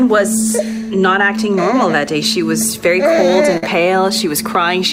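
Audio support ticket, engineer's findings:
Burst of packet loss, 3.57 to 3.63 s. Receiver concealment extended the last sound for about 50 ms, fading it as the gap ran on; playback resumes later in the stream, with about 50 ms of audio missing. Probable component: network path or jitter buffer.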